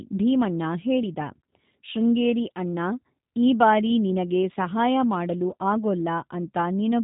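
From start to finish, the speech carries G.729 codec damage, plainly audible. Nothing above 3.8 kHz survives, so the sound is dull and narrow. The low bitrate, which fits 8 kbit/s G.729A, rebuilds each frame from a filter and sparse pulses. That leaves it rough and slightly synthetic.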